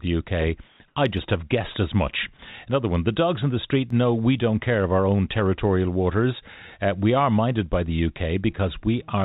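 Between 0.68 and 0.80 s, and again from 0.88 to 0.96 s, the pauses carry comfort noise in place of the background. The real room sound, sitting about 37 dB and about 44 dB below the loud passages, gives way to a steady, featureless hiss for 120 ms and then 80 ms. The first stretch matches the surrounding level, while the second is about 1 dB quieter. This is likely discontinuous transmission: the sender stops sending during the gaps and the receiver synthesises noise shaped to the background.

At 1.17 s, just before "have guessed as much", and at 3.90 s, between "dogs in the street" and "know we don't care", the audio contains a dropped buffer (overrun). At each event the sound jumps forward with no silence, skipping roughly 10 ms. The likely cause is that the capture side failed to read its samples before the hardware overwrote them, so both edges are spliced together directly. The call path's band limit is audible throughout, with nothing above 4 kHz, which fits G.711 A-law at 64 kbps.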